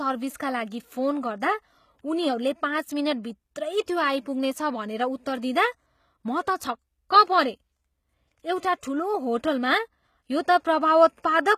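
Speech throughout has gritty, metallic, lispy s sounds and nothing above 14.9 kHz, likely HE-AAC compression at a low bitrate near 20 kbps. Unlike a plain low-pass, the treble reaches higher but is rebuilt from copied lower bands, so its harmonics don't line up.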